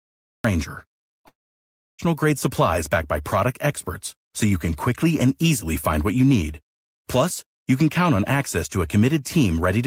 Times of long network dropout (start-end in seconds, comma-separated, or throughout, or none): 1.27-2.00